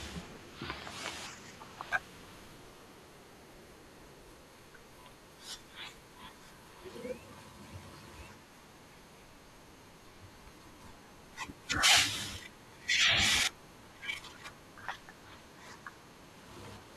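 At 1.82 s, 10.30 s and 15.21 s the speech jumps, each time losing a sliver of around ten milliseconds or less, most likely a dropped buffer (overrun). Unlike a dropout, no gap of silence appears; the surrounding audio is simply spliced together.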